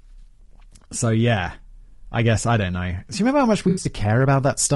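Throughout the speech, the sound is rough and grainy, with a hiss-like haze between the voice's harmonics and a thin, synthetic top band. The cause is likely low-delay AAC compression: AAC-ELD's short frames resolve pitch poorly, and the damage here fits a bitrate around 32 kbps.

From 3.69 to 3.87 s, a smeared, noisy patch breaks through the voice. This is AAC frame loss with concealment. About 100 ms of audio went missing, scattered over 160 ms, the longest gap somewhat under a tenth of a second. The decoder filled it from the last good spectrum.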